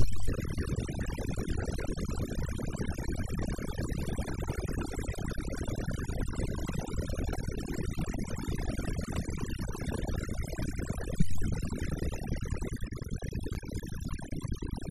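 From the start the background sinks to near silence speckled with twinkling artefacts. This is overdone noise removal: a noise reduction stage was set too hard, pushing individual frequency bands down or off wherever they came close to its noise estimate. The quieter parts of the voice sat in that range, so they were carved away along with the hiss, which produces the flickering residue.

Between 12.53 and 14.31 s, eight small ticks arrive in a regular run, about four or five each second, each only a few milliseconds long. These are CD scratch ticks. A scratch or blemish on the disc destroyed more data than error correction could rebuild, once on every rotation, and the player patched each damaged stretch by interpolating or muting it. The steady spacing of the ticks matches the disc's turning speed.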